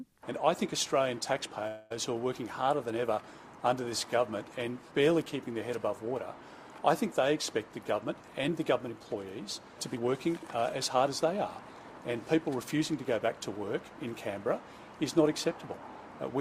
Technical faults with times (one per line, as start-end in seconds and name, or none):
1.67-1.92 call audio freeze
8.12-9.16 jitter buffer speed-up
9.94-11.33 jitter buffer speed-up
12.10-12.92 jitter buffer speed-up